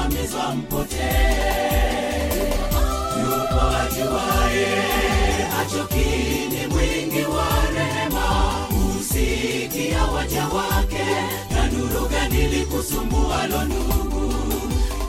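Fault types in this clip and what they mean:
Nothing stood out on listening to the audio.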